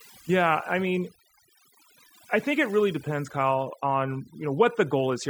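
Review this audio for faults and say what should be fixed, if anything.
Overdone noise removal runs throughout the speech. The noise reduction is set too aggressively, so frequency bands near its noise estimate are cut deeply or removed. That leaves near-silent gaps with twinkling specks between phrases, and quiet parts of the voice are cut along with the noise. Prevent it by using gentler reduction settings and checking the result by ear.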